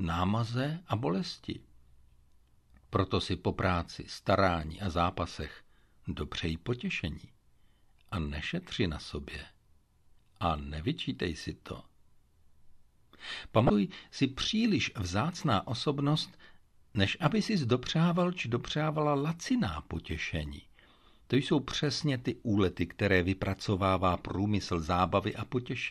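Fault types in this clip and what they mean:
Damaged data in a compressed stream: a short glitch from 13.67 to 13.70 s, just before "si příliš vzácná osobnost", where the decoder misreads corrupted frames and resyncs at the next header.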